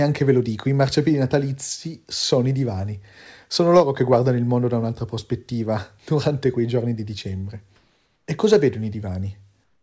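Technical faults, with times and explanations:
3.76 to 4.16 s, hard clipping: Just before "il mondo da un'altra", the speech is driven about 2 dB past what the path can carry. Peaks are sliced flat. Those flat tops add high harmonics, so the loudest moments gain a brief crackle and edge.
7.76 to 8.28 s and 9.64 to 9.82 s, comfort noise in place of the background: After "quei giorni di dicembre", and again at the very end, the room sound becomes a smooth, featureless hiss. It drops about 2 dB, then about 5 dB. This is likely the sender muting pauses and the receiver filling them with synthetic noise.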